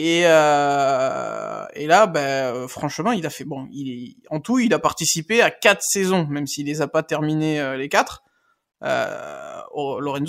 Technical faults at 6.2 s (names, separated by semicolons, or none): none